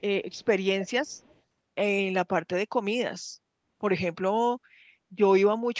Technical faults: echo leak

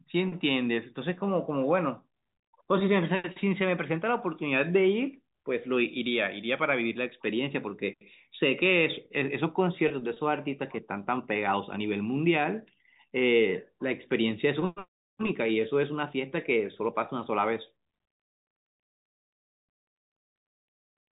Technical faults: packet loss with pitch repetition

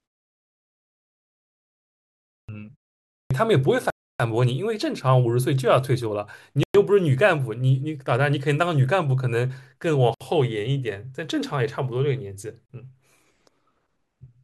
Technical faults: clipped start after a pause; Bluetooth stall

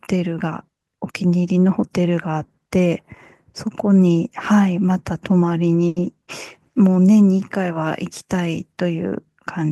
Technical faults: short stall from a late packet

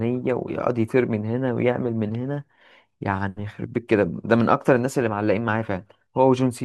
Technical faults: none

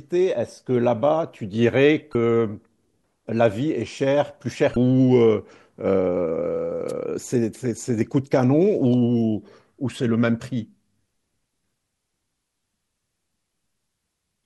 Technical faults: damaged data in a compressed stream; wireless microphone noise hit

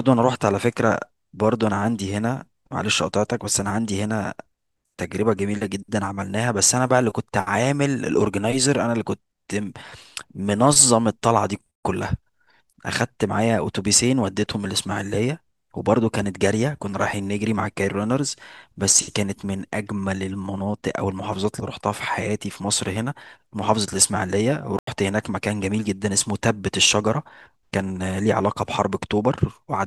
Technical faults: corrupt FLAC frame; corrupt frame muted

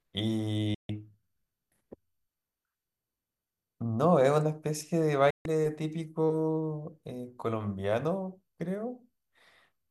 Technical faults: digital broadcast dropout

